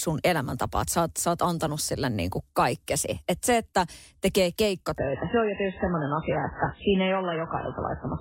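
A speech clip that drops to a lower-bitrate adaptive stream at 4.98 s, right after "se että tekee", and stays there to the end: everything above about 3.8 kHz vanishes with no gap, which fits a fall from roughly 128 to 8 kbit/s MP3. A spectrogram shows the upper band abruptly blanking.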